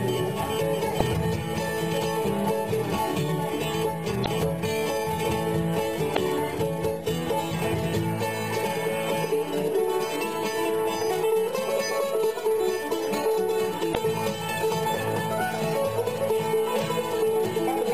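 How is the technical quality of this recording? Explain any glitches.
The recording has four short glitches from damaged data in a compressed stream. They fall at 0.96 to 1.01 s, 4.22 to 4.28 s, 6.13 to 6.18 s and 13.91 to 13.97 s. Each lasts under 60 ms. Corrupted bytes make the decoder misread frames and lose sync. Each one is heard as a brief chirp or blip.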